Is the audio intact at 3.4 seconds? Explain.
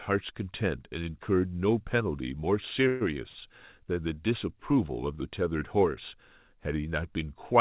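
No. A short stall from a late packet runs from 3.28 to 3.38 s, right up to that moment. A packet arrived late, the jitter buffer ran dry, and the receiver held the last sound for about 66 ms before resuming from the same point. The result is a drawn-out, slightly buzzy sound that then moves on. Unlike a lost-packet dropout, nothing is skipped: the speech simply arrives about 66 ms later than before.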